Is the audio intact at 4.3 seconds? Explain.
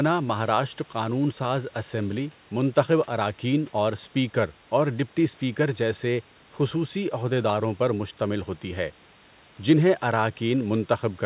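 Yes, the audio is intact at 4.3 seconds, with nothing there beyond the narrowband G.711 call path, which passes nothing above 4 kHz, and the room's background noise sitting about 32 dB below the speech.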